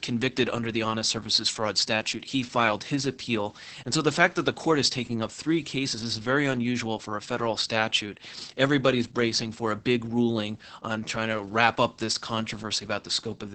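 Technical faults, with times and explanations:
Throughout, Opus voice compression: the speech runs through the SILK coder at what sounds like about 10 kbps, so the band stops near 8 kHz and the excitation is coded coarsely, leaving it heavily muffled, hoarse and a little robotic.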